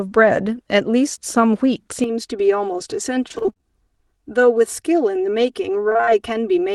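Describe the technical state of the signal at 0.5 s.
At 0.5 s the speech signal is intact, with no audible technical fault at that moment.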